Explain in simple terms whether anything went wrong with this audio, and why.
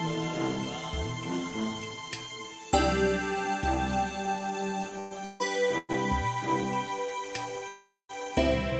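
Delayed packets likely let the call's jitter buffer run dry, causing a call audio freeze at 4.99–5.13, 5.25–5.42, 5.78–5.91 and 7.68–8.11 s. The music stalls into a fading buzz, briefly silent in the last one, then resumes where it stopped, with nothing lost.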